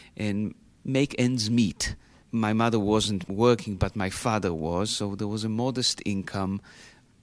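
No technical faults can be heard anywhere in this speech recording. There is no moment in it that needs a timestamp or an explanation.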